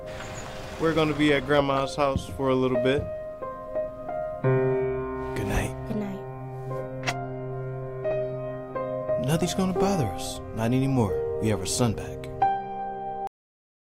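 The audio has a cut-off end at 13.27 s: sound stops mid-event and drops straight to digital silence, a flat waveform and blank spectrogram, because the final buffers were never written.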